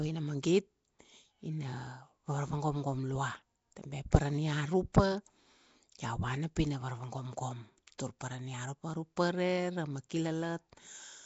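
Nellymoser compression, throughout: the rough, hissy halo, smeared underwater quality and absence of anything above 7.7 kHz likely come from Flash's Asao codec at about 32 kbps, filling starved bands with noise. Pre-echo, at 7.98 s: quantisation noise from a loud attack spreads back into the quiet 10 ms before it, giving a brief hiss and a softened onset.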